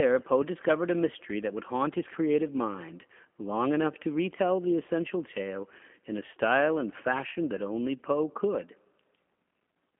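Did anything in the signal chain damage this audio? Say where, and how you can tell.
Yes, at the codec: throughout, the speech sits in 200 Hz to 3.4 kHz with a rough, synthetic edge. That's classic G.729 pulse-rebuilt speech, consistent with 8 kbit/s.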